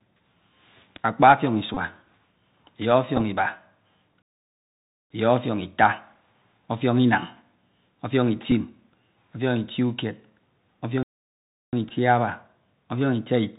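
Speech heard through a Bluetooth CVSD headset codec, whose one-bit delta coding at 64 kbps cuts everything above 4 kHz, so a spectrogram shows a hard ceiling there, with granular hiss and scratchy sibilants. Bluetooth headset packet repeats occur at 1.74–1.77 s, 3.17–3.22 s, 8.51 s and 11.89 s. Each replays the last packet's bits every 3.75 ms, giving a brief buzz near 267 Hz that appears as fine regular striping in the spectrogram. Two playback stalls cut the sound at 4.22–5.10 s and 11.03–11.73 s, most likely because the player ran short of data, and each shows as a flat, silent stretch in the waveform.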